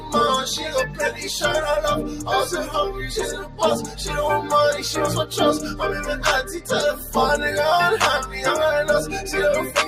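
A noise suppressor applied to music or sounds runs through the whole clip: a processor built for speech treats sustained and ambient content as noise, so level swings by roughly 5 dB as it clamps down and releases, leaving held material pumping and thinned while attacks pass largely intact.

Sound cut by the noise suppressor occurs at 0.87–1.24 s, 3.38–3.61 s and 6.95–7.15 s. In each span the suppressor judged the steady or decaying sound to be noise and pulled it down harder than its surroundings, by about 6 dB, 8 dB and 5 dB at the deepest points. Each dip lasts a few hundred milliseconds and is heard as the sound sagging or its tail being cut short.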